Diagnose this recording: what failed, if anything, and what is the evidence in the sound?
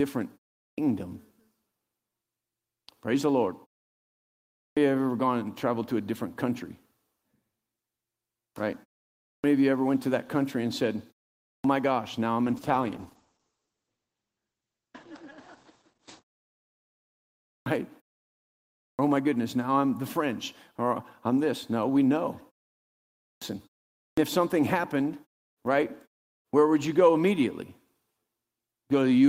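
Clipped start after a pause at 0.68, 4.67, 9.33, 11.55, 17.57, 18.89, 23.32 and 24.08 s: the playback device sleeps through silence and swallows roughly 90–110 ms of each onset while waking.

Call bitrate drop from 12.44 to 17.95 s: the network estimate fell, and the Opus encoder dropped from 32 to 12 kbps, narrowing bandwidth from 20 kHz to 8 kHz and sounding muffled and coarse.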